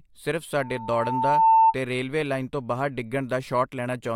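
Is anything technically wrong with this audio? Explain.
Yes, there is loudspeaker feedback squeal from 0.61 to 1.75 s, just before "ਤੇ ਰੇਲਵੇ ਲਾਈਨ ਤੋਂ". The microphone re-amplified its own loudspeaker, and loop gain exceeded one at 893 Hz. Over about a second this swelled into a steady tone roughly 10 dB above the speech.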